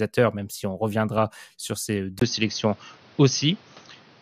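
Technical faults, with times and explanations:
0.97–1.23 s, DAB burbling: a bubbling, squelchy chirp runs under the speech, as bit errors at a small fraction of a percent slip past error correction and corrupt samples and scale factors, making single sub-bands jump in level frame by frame.
2.19 s to the end, input switched to a poorer device: after a 20 ms gap the speech turns duller, with nothing above 6.4 kHz and new background noise about 30 dB down at a similar level, likely from a mid-recording change to a narrower-band microphone or headset.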